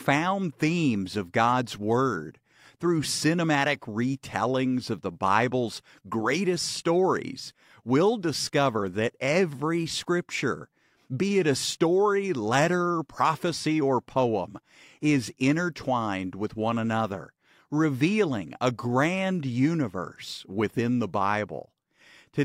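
No technical faults can be heard anywhere in the speech recording.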